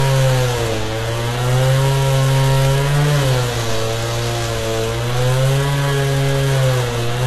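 From start to finish, nothing sits above about 12.3 kHz, and the first encoding's artefacts are still there. It's likely low-bitrate audio saved at a high bitrate: something like 16 kbit/s HE-AAC re-encoded to a roomy MP3 that can't restore what was lost.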